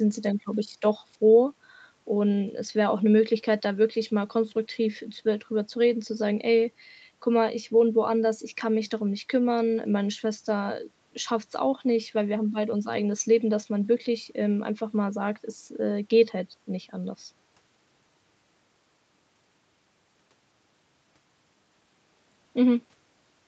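No technical faults occur anywhere in the speech, which carries the normal call processing and coding with nothing above 8 kHz.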